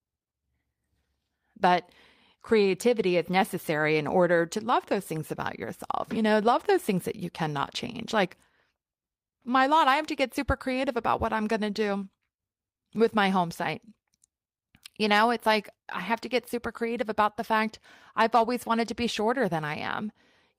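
Listening to the speech recording, nothing technical stood out.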